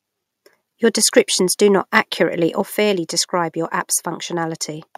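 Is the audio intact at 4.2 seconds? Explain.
Yes, at 4.2 seconds the audio is intact, with no dropout, click, distortion or other fault at that moment.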